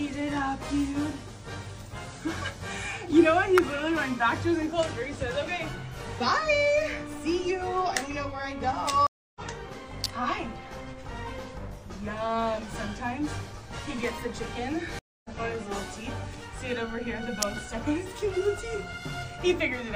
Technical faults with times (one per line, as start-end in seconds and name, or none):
3.58 electrical switching spike
9.07-9.40 stream reconnect
10.04 electrical switching spike
14.99-15.30 stream reconnect
17.42 electrical switching spike